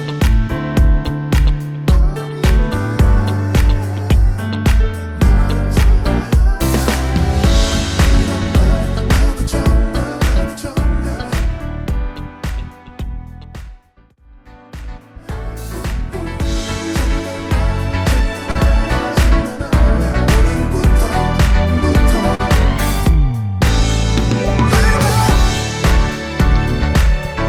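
At 18.51 to 18.57 s and again at 22.35 to 22.41 s there is short concealed packet loss. About 40 ms of audio arrived too late each time, and the receiver patched the gap by extending the preceding sound before crossfading back. Each patch is heard as a brief smear or wobble. On a spectrogram the patches show as short stretches of repeated, slightly blurred harmonics or flat noise texture. The waveform shows a repetitive segment in place of natural variation.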